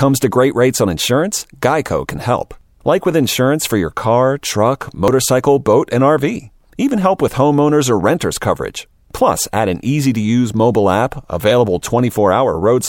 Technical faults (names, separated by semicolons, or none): dropped buffer (overrun)